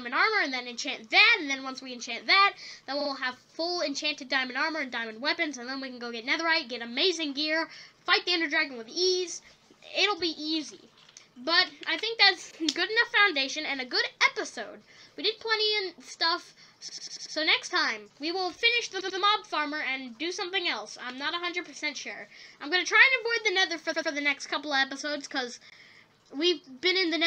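A run of compressed frames was sent more than once, so the decoder replays the same short block, heard as repeated frames. At 3.00 s a 46 ms block plays two extra times, stretching the audio by about 93 ms. At 16.88 s a 93 ms block repeats five times, adding 464 ms. At 19.00 s and 23.92 s, 93 ms blocks each repeat twice, adding 186 ms. Each sounds like a mechanical stutter.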